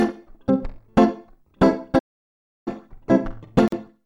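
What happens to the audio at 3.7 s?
A gap at a join of encoded pieces: from 3.68 to 3.72 s, a 45 ms gap left by untrimmed encoder delay and padding cuts the sound, its edges smeared by the codec, before it resumes.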